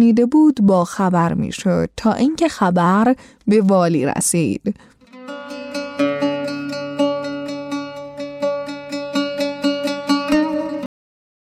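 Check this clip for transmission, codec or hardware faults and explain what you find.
One fault is present, a cut-off end. At 10.86 s the sound stops mid-event and drops straight to digital silence for the final 0.59 s. The last buffers were never written or played out, so nothing decays. A fade-out or natural ending would taper away instead.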